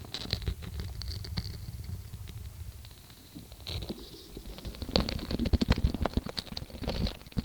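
At 5.32 s a call bitrate drop sets in and holds to the end at 7.45 s. The sound turns coarse, watery and dull, which fits the encoder falling from around 128 kbps to about 14 kbps. A plain low-pass filter would only dull the sound, but here swirling coding artefacts come with the lost treble.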